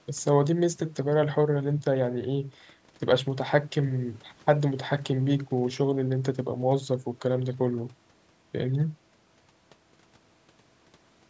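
No technical faults can be heard in this audio.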